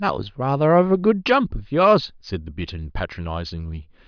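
Speech, with no audible technical faults.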